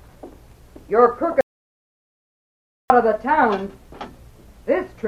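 At 1.41 s the sound cuts to total silence until 2.90 s. This audio dropout to silence likely came from lost input. About 1.5 s is gone.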